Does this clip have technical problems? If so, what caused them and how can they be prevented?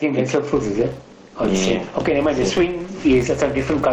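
Yes. Gain pumping runs through the whole clip: the gain swings by around 15 dB, pulled down under each loud stretch of speech, squashing the dynamics. This is likely an input gain set far too high, with a fast limiter or compressor hauling it down on every peak. Setting the microphone gain lower so the limiter rarely engages would prevent it.

A filter restarted on every block causes a buzz from 0.54 s to the end. The filter is reset to silence at each block boundary, so each block opens with a small transient. These add up to a 200 Hz buzz that rises and falls with the speech level, which fits blocks about 5 ms long. Carrying the filter's state over from one block to the next would prevent it. The call codec's 8 kHz upper limit is also audible as a dulled top end, though that is normal for this path.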